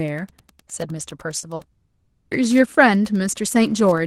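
A nearby Wi-Fi radio is coupling into the audio circuit for the whole recording, and the circuit rectifies its transmissions. The beacon repeats every 102.4 ms, so a faint, steady ticking runs under the speech at about ten clicks a second, sitting far below the talker, roughly 35 dB down. This Wi-Fi interference is constant from start to finish rather than tied to any moment in the speech.

At 1.39 to 1.46 s and again at 1.55 to 1.62 s, there is short concealed packet loss: in each case about 40 ms of the stream failed to reach the decoder in time. The receiver covered each gap by extending the sound just before it and then blending back into the real signal. Each one is heard as a brief smear or wobble, and whatever short detail fell inside those 40 ms is gone.

From 1.71 to 2.34 s, about 600 ms of the speech is missing, and nothing in that stretch is real signal. Instead the last sound is drawn out as a synthetic buzz or hiss that decays but never drops to true silence before the speech resumes, with the lost portion skipped. 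That behaviour is most likely a long network dropout, with the receiver's concealment stretched across the entire gap.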